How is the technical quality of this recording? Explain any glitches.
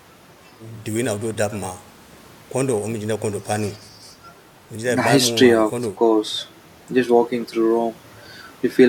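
No technical glitches are audible.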